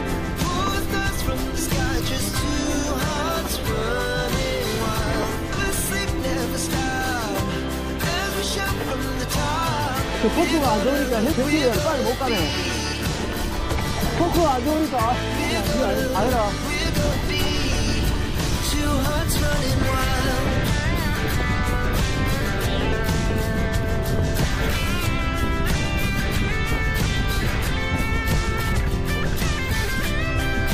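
Audio missing between chunks at 5.52, 17.12, 22.92 and 28.72 s: the sound jumps abruptly forward, losing about a fifth of a second each time, with the two sides butted together. The spacing points to the recording likely being handled in 6-second chunks.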